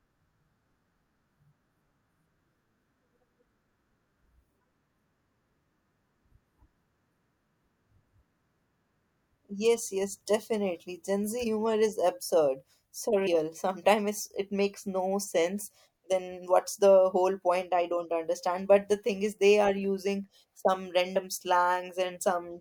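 At 11.43, 13.26 and 21.15 s, compressed frames are skipped: the speech jumps ahead by roughly 50, 150 and 50 ms, fitting whole 26.1 ms frames lost or rejected by the decoder. Overlapping neighbours smear each join into a brief blip rather than a click.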